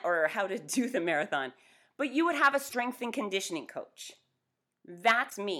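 A speech recording with two brief glitches: one from 2.65 to 2.75 s, between "you would have a" and "and conditioning", and a shorter one from 5.27 to 5.34 s near the end. Both come from damaged data in a compressed stream. Corrupted bytes in those stretches make the decoder misread the affected frames and lose sync until it finds a valid frame header again, producing the glitch in place of the intended sound.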